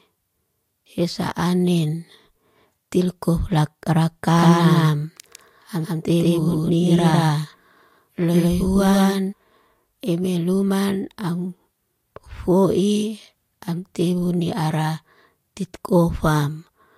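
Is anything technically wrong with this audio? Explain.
Yes. From 4.37 to 9.33 s there is a doubled audio track: the speech is mixed in twice, with a second full-band copy trailing the first by around 150 ms at roughly the same level. The likely cause is either a second capture of the same signal arriving through a slower path or an edit that left two copies out of alignment. The copy has no decay or room colour, so it sounds like a flat, distinct repeat, and it starts and stops abruptly at those times.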